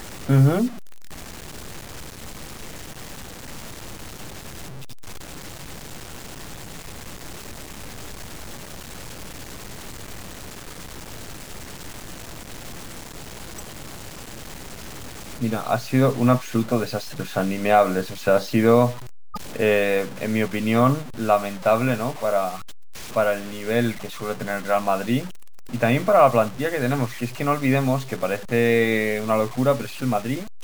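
From the start, the speech carries a grainy distortion that rides on the sound. It sits roughly 20 dB below the speech itself. Quiet syllables and decays turn rough and sputtery, and the faintest parts break up toward silence. The likely cause is low bit depth without dither. The signal seems to have been cut to very few bits, which fits about a 6-bit word, and then truncated. The error tracks the speech, so the grit changes with every sound.

At 13.58 to 13.61 s a short blip cuts through. This is a corrupt frame decoded. Damaged bits in one compressed frame were played anyway, so energy landed at wrong frequencies. The burst lasts about one frame and peaks around -20 dBFS. At 19.34 to 19.37 s a second, similar chirp follows. It points to several frames hit in a row and reaches a similar level.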